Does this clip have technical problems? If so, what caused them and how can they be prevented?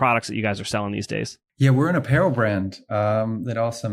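No, the speech signal comes through intact, with nothing in it that points to a fault in the recording or transmission chain, so there is nothing here that needs preventing.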